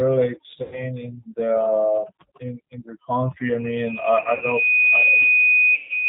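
From start to finish the speech is squeezed through the G.729 codec. Nothing above 4 kHz survives, so it sounds narrow and telephone-like. The codec rebuilds each short frame from a vocal tract filter, a pitch predictor and a few pulses. The damage is plainly audible as a rough, slightly synthetic edge, which fits the 8 kbit/s rate.

Overdone noise removal also runs throughout. The reduction was set far too strong. Frequency bands near the estimated noise level are cut deep or dropped. Quiet parts of the voice vanish along with the noise. In the pauses the background drops and breaks up into twinkling specks.

VoIP packet loss concealed by the speech codec first hits from 0.62 to 0.85 s, just before "in the in in". About 100 ms of audio is missing. The decoder stretches its last pitch and filter into a buzzy tone or coloured noise that fades as gain drops. From 4.21 to 4.46 s, a scattered 100 ms of loss over 200 ms leaves short concealed gaps, the longest about 60 ms. 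From 5.75 to 5.90 s, 140 ms is lost. The voice stays weak and distorted briefly afterwards.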